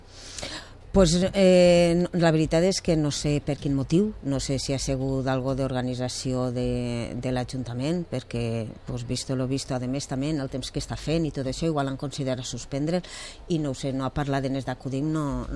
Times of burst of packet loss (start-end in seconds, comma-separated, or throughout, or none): none